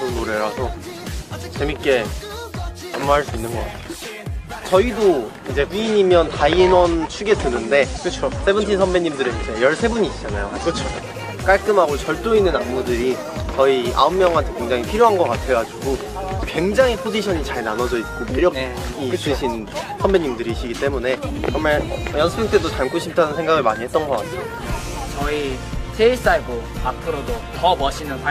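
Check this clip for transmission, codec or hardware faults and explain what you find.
From 5.67 to 11.21 s the digital radio blends to analogue FM over about 230 ms. Hiss rises, roughly 30 dB down. Level holds steady.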